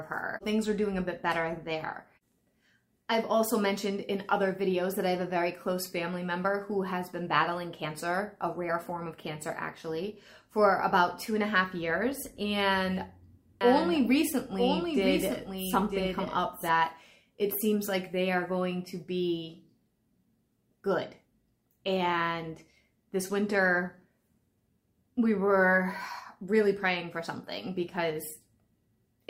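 From 13.61 to 16.69 s a doubled audio track appears: a second full-band copy of the sound runs about a second behind the original, roughly 5 dB quieter, likely because the signal was captured twice through a slower path or an edit left two copies out of step. Unlike an echo or reverb, the copy repeats only once, has no decay tail or room colour, and switches in and out abruptly at those boundaries.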